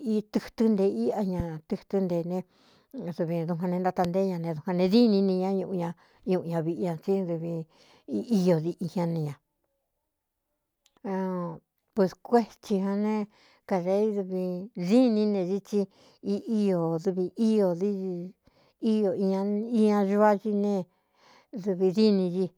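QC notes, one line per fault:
1.40 s and 4.05 s, loud pop: two single sharp pops, each lasting about 26 ms, peaking about 10 dB and then about 15 dB above the speech, which carries on underneath. Each is likely a sudden voltage step or pulse, such as static or a switch or driver glitch, added to the signal.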